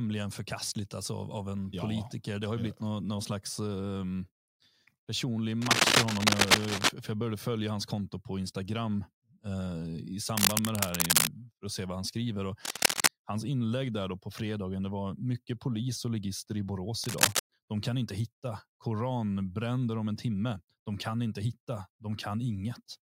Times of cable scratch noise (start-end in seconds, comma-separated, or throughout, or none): 5.62-6.89, 10.37-11.27, 12.65-13.08, 17.04-17.39